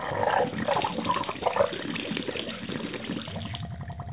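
No technical faults can be heard in this recording of sounds. It has passed through a call path whose narrowband codec leaves nothing above 4 kHz, which fits G.711 mu-law at 64 kbps.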